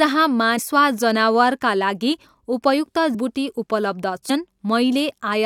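Compressed frames skipped at 0.58, 3.14 and 4.29 s: each time, whole blocks of the encoded speech never reach the output, either missing from the file or rejected by the decoder as damaged. The speech jumps forward, by about a tenth of a second at 0.58 s and about a third of a second at the later two points, which fits frames near 21.3 ms long.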